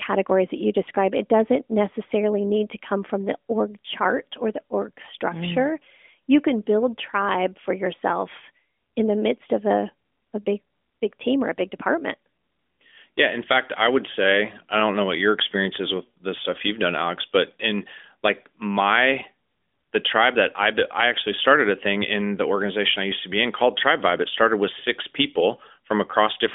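No faults can be heard anywhere in this speech clip. It comes through an AMR narrowband mobile codec at 12.2 kbps, so the sound is held to a telephone band of roughly 250 Hz to 3.5 kHz, with only light coding damage.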